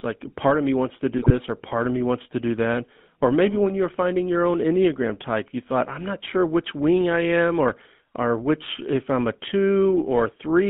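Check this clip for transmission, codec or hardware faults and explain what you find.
Two faults are present: a GSM full-rate codec across the whole clip, and a short burst of GSM bit errors early on.

The GSM full-rate codec runs throughout. It models the vocal tract as a filter and rebuilds the excitation from a sparse, regularly spaced pulse train, so much of the fine detail in the driving signal is discarded. The damage is plainly audible: the speech has a buzzy, gravelly roughness, and nothing survives outside roughly 150 Hz to 3.5 kHz. That character fits the 13 kbps full-rate mode.

GSM bit errors hit from 1.18 s to 1.32 s. Corrupted bits reached the decoder and garbled the parameters it uses to rebuild each frame: filter shape, pitch and gain. Wrong filter values twist the spectrum, and wrong gain values make the level jump. The speech breaks into a brief gargling squawk with pops. 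The length of the burst points to about six corrupted frames, which fits a fairly high error rate on a weak link.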